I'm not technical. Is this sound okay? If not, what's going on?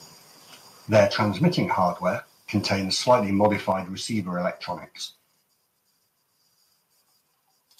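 No, there are two related problems, both in the first half of this speech clip.

The first is microphone overload, heard from 0.94 to 1.22 s, just before "hardware contains", and again briefly from 3.44 to 3.46 s, before "receiver electronics". The loudest moments are harsher and crackly, with a flattened, gritty edge. The likely cause is that the microphone level was set too high, so the tops of the loudest peaks hit the recording limit and were sliced off, in short bursts each time.

The second is a microphone volume stepped down, heard at 0.97 s, right inside that first harsh patch, and again at 3.72 s, shortly before "receiver electronics". At each point the voice and the background suddenly become quieter in a single step rather than a smooth fade. This likely happened because the call software noticed the overload and turned the microphone's input level down automatically. The second drop is the larger of the two.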